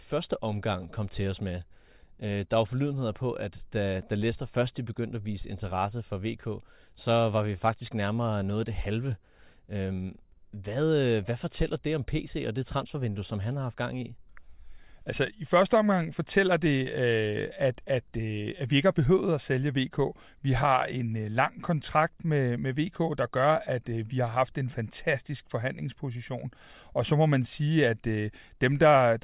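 No technical faults can be heard anywhere in the recording.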